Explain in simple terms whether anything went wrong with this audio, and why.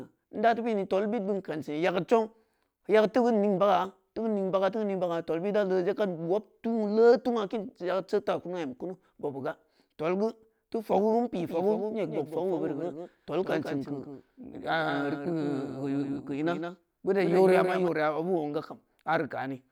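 A doubled audio track runs from 11.40 to 17.88 seconds. During that stretch the speech is heard twice: a second, somewhat quieter copy trails the original by about 150 milliseconds, unlike a natural echo, since the copy has no fade or room sound. It switches on and off abruptly. The likely cause is the same audio being picked up again through a slower route and mixed back in.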